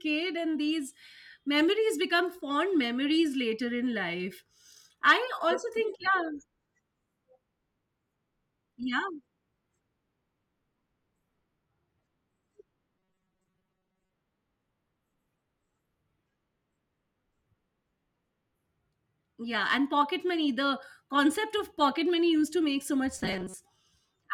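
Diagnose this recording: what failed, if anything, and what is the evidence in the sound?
Robotic sound from repeated short buffers appears from 12.98 to 14.13 s and again from 23.19 to 23.54 s. In both stretches the speech becomes a rigid, metallic buzz locked at 188 Hz that only roughly tracks the words. The stage is likely the driver or buffer: when audio arrives too slowly, a fragment of about 5.3 ms, matching that pitch, is replayed in place of most of the incoming signal.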